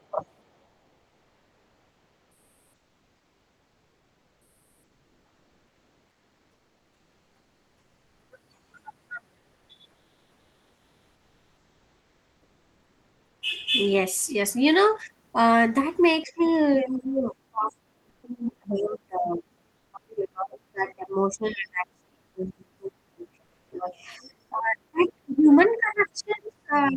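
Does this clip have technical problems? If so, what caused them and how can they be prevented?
Yes. Speech suppressed in double talk, likely from an echo canceller that could not tell this talker from loudspeaker echo while both sides spoke, pulls the sound down by roughly 20 dB over 0.00–0.23 s and by as much as 30 dB from 16.23 s to the end. Keep echo-path tuning accurate and use double-talk detection that protects the near talker instead of ducking everything.

Comfort noise in place of the background appears at 8.55–8.73, 9.37–9.69, 9.91–13.41, 18.09–18.23, 19.77–19.93 and 23.45–23.71 s. The likely cause is discontinuous transmission, which fits Opus DTX, halting audio during pauses. The receiver then substitutes smoother synthetic noise, about 5 dB quieter at 8.55 s and about 9 dB quieter at 18.09 s. Disable DTX where natural background continuity matters.

The other side's voice leaking through, likely from loudspeaker output that the canceller left in the microphone signal, appears as faint scraps at 16.43–16.51, 18.77–18.82, 24.23–24.30 and 25.01–25.08 s and as a longer stretch at 25.67–26.34 s. 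It sits well below the talker, roughly 25 to 40 dB down. Use a headset or reduce loudspeaker volume so less echo reaches the microphone.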